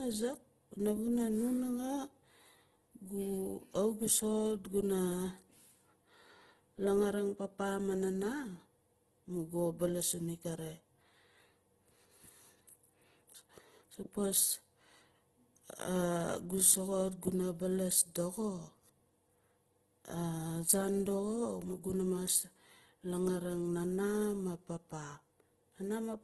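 Throughout the speech, tones sound rough and grainy rather than clean, and nothing reaches above 12.3 kHz. The likely cause is heavy Opus compression in its music mode, at a rate consistent with about 12 kbps. A spectrogram shows a hard ceiling at 12.3 kHz and speckled, noise-filled bands where harmonics should be.

At 17.21 s a pre-echo appears. A short hiss of about 10 ms runs ahead of a sharp attack because the codec spread its quantisation noise across the whole transform block, including the quiet moment before the onset. The waveform shows low fuzz just before the transient, and the spectrogram shows a thin vertical smear.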